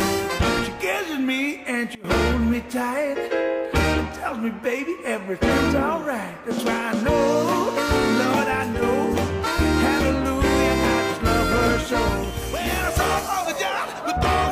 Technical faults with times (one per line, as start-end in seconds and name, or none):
1.95-2.04 sudden gain jump
8.73-8.82 sudden gain jump